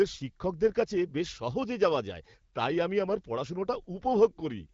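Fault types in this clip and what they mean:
Nothing stood out on listening to this recording.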